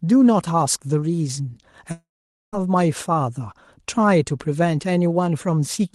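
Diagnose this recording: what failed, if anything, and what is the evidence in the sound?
Long network dropout, 1.91 to 2.55 s: speech trails into a fading concealment buzz, then silence. The likely cause is lost packets at the network stage, so 0.62 s never plays.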